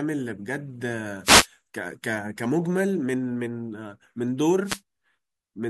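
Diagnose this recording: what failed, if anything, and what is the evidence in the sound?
The analogue FM radio link between the wireless microphone and its receiver faded twice as reflected signals cancelled, letting receiver noise rise. The result is a wireless microphone noise hit: brief swishes of static over the speech from 1.24 to 1.47 s and from 4.63 to 4.81 s.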